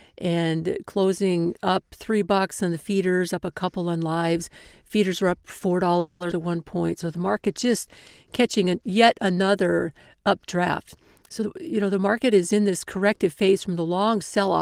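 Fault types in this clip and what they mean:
Call audio freeze: Right after "were up four", from 5.99 to 6.22 s, the sound hangs for about 210 ms. The last bit of audio is carried on as a held-over tail instead of dropping to silence. That's likely packets stalling in transit and the jitter buffer running dry. When the audio resumes it picks up exactly where it stopped, so nothing is lost. The whole stretch just arrives 210 ms later than it should.
Skip ahead: A moment later, at 6.30 to 6.33 s and still just after "were up four", playback jumps forward. Roughly 70 ms of audio never plays, and the two sides are butted together with only a tiny 10 ms join, so there is little or no gap. Dropping that chunk claws back around 50 ms of the delay the freeze had just added.
Jitter buffer slow-down: Between 6.42 and 6.87 s the receiver is padding its reserve by repeating single pitch periods over and over. 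That adds 53 ms to the stretch, so it plays at about 90% speed. The pitch stays put, but sounds get drawn out a little and can take on a faint warble, like someone briefly dragging their delivery.
Call bitrate drop: From 6.87 to 9.57 s the encoder gets squeezed from 32 kbps down to 18 kbps after the bandwidth estimate falls, and it sits at that floor for about 2.6 s. With far fewer bits to spend, the coding gets coarser. The audio turns rougher and a bit watery compared with the stretches either side, then cleans up again once the rate comes back.
Jitter buffer speed-up: From 11.30 to 13.27 s the jitter buffer is holding more audio than it wants and trims the excess. It cuts short pieces of one or a few pitch periods many times in a row, removing roughly 200 ms in total. The result plays at about 110% speed with the pitch unchanged, so that stretch comes across as hurried.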